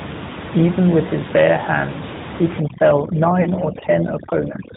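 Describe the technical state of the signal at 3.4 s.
At 3.4 s the signal carries AMR narrowband mobile codec coding, as it does throughout. Nothing above 4 kHz survives, and the voiced sound has a plainly audible buzzy, synthetic quality from the pulse-driven vocal tract model, which fits a mid-rate mode near 10.2 kbps.

Overdone noise removal is active here, from 2.6 s, just after "his bare hands he", to the end. The suppressor pulls bands near its noise estimate far down, so the room noise, about 11 dB below the speech, drops and breaks up into twinkling specks.

Lost AMR speech frames follow at 3.42 to 3.50 s, a 40 ms gap consistent with two lost 20 ms frames. The decoder repeats the last good pitch and vocal tract settings at falling gain, so the sound briefly smears and dips before returning somewhat weak.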